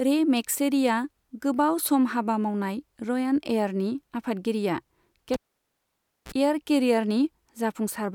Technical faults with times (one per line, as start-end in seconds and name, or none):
5.34-6.32 cable pulled and plugged in